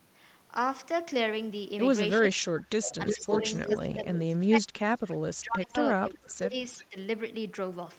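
From 2.32 to 3.44 s the speech sinks, at worst by around 30 dB. This is speech suppressed in double talk. Both sides were likely talking at once. The echo canceller could not tell the near talker from the loudspeaker return, so it pulled everything down.

From 3.06 to 3.77 s a second copy of the speech sits about 347 ms behind the first. It is roughly as loud as the direct sound. This is echo leak, likely from a loudspeaker call where the canceller let the returning signal through.

From 3.65 to 5.75 s the suppression returns for about two seconds, with dips near 25 dB. From 6.0 to 6.55 s it happens again at a similar depth.

From 6.77 to 6.96 s a milder dip of about 10 dB follows. Inside it, from 6.81 to 6.86 s, a faint echo slips through about 358 ms late, some 25 dB below the speech.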